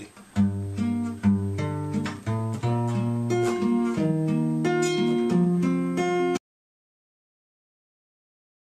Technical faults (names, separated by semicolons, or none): audio dropout to silence